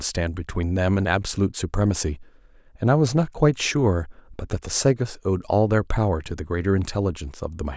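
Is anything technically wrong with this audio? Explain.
No, nothing technically wrong can be heard anywhere in this speech recording.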